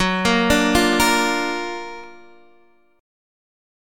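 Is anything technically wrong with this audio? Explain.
Yes, there are two sharp clicks, at 0.93 s and 2.04 s, each a brief vertical line across the spectrum. They're likely dropped samples: a fraction of a millisecond goes missing, so the waveform jumps.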